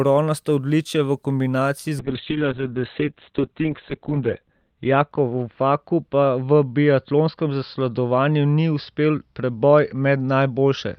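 From 2.0 s to the end, a call bitrate drop starves the encoder of bits, consistent with a fall from about 40 kbps to 6 kbps. Bandwidth shrinks from 20 kHz to 4 kHz, so the speech turns muffled and coarse, worst for about 2.15 s.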